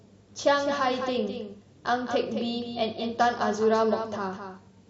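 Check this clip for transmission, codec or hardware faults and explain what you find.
There is one fault, a doubled audio track running through the whole clip. A second full-band copy of the speech trails about a fifth of a second behind, roughly 10 dB quieter, likely from a slower second capture path being mixed in. It sounds like a dry, flat slapback with no decay or room colour.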